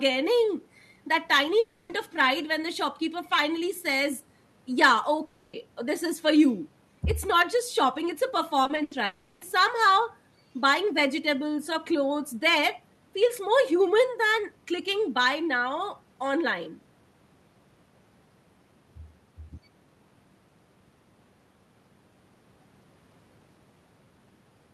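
Speech, with three breaks and one choppy patch. At 1.59 to 1.91 s, 5.25 to 5.55 s and 9.05 to 9.43 s, the sound stops being real audio for about 0.3 to 0.36 s. Each gap is covered by a smeared continuation of the last sound, with no silence. Then the speech resumes with that stretch gone. This is likely a long network dropout, with the receiver filling the hole. From 8.63 to 8.93 s there is repeated packet loss, giving a robotic sound. Four short gaps hit this 0.3 s span. The longest is 80 ms. About half the span is patched by repeating the previous sound. The result is choppy, with pieces missing.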